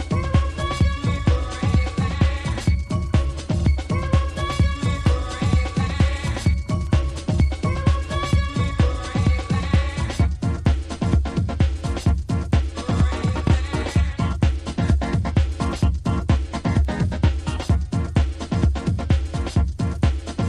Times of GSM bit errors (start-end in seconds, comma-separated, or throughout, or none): none